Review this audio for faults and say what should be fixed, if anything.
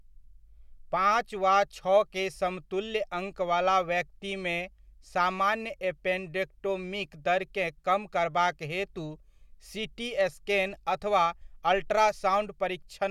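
There's one fault to fix: a short burst of damaged data in a compressed stream at about 11.40 s, right after "सीटी स्कैन अथवा". It comes through as a quick glitch in the speech. What's going on is that a stretch of the encoded file got corrupted, so the decoder couldn't read that frame properly, lost its place, and had to hunt for the next valid frame header before playback carried on. To prevent it, re-export or re-fetch from a clean source and verify file checksums after transfer.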